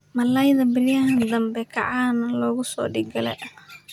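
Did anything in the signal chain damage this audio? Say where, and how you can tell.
No, nothing in the chain from capture to playback has left an audible mark on this speech.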